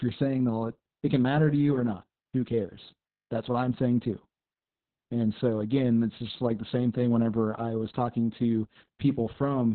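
Speech with heavy Opus voice compression throughout. Nothing survives above 4.3 kHz, so it sounds muffled, hoarse and robotic. That fits narrowband SILK at roughly 6 kbps.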